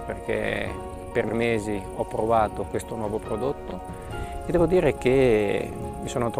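Frames out of order occur three times, at 1.24 to 1.34 s, 3.68 to 3.74 s and 5.70 to 5.76 s. Neighbouring blocks were decoded swapped, about 46.4 ms each in the first (which fits two-frame runs) and 23.2 ms in the others. Each stretch plays with its halves exchanged, a brief garbled flutter with no lost time.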